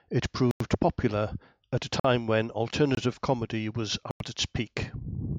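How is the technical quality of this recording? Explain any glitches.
The recording is marred by four blocks of digital silence, hard dropouts where the audio cuts to silence with no fade.

At 0.51 s, just before "popular at a", a 93 ms block of digital silence cuts in, which fits a 4096-sample buffer the program failed to fill in time. It is heard as a short hole.

At 2.00 s a 46 ms gap, consistent with a 2048-sample buffer, produces a briefer hole.

At 2.95 s, right before "comedy was", a 22 ms gap is heard as a very short hole.

At 4.11 s, just after "comedy was", another 93 ms gap, again matching a 4096-sample buffer, leaves a short hole.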